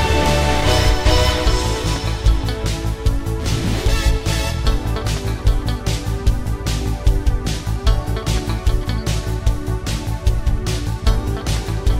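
A worn or dirty contact making and breaking intermittently chops the signal, giving loose connector crackle: irregular scratchy bursts from 0.58 to 0.75 s and from 4.21 to 4.40 s.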